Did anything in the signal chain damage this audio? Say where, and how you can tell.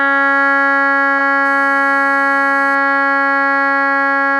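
Yes. The first fault sits in the codec stage. At 1.18 to 1.21 s a short blip cuts across the music. It is a corrupt frame decoded. Bits inside a handful of compressed frames were flipped, and the decoder played them anyway. Misread gain and spectral codes put energy at frequencies the music never had. The burst peaks fairly hot, near -15 dBFS, and it lasts only as long as the damaged frames.

The second fault enters at the analogue wiring. From 1.45 to 2.75 s a hard, raspy buzz runs under the music. It is GSM phone buzz. A nearby 2G phone transmits in bursts at 217 Hz, and the audio circuit rectifies those radio pulses. The result is a 217 Hz tone rich in harmonics, about 29 dB below the music. It stays nearly steady, which fits a phone on a call.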